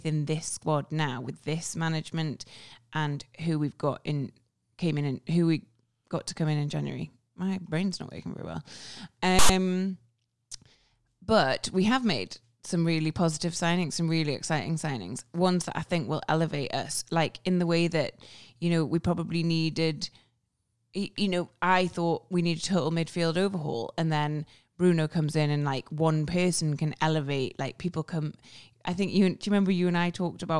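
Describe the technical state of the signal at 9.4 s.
At 9.4 s the speech is interrupted by file tags played as audio, running from 9.39 to 9.49 s. A block of text tags is being decoded as if it were sample data, so byte values become amplitudes, giving a loud, harsh rasp with hard edges. On the waveform the burst appears as a dense slab pushed to one side of zero; on a spectrogram it is a broadband vertical stripe with abrupt boundaries.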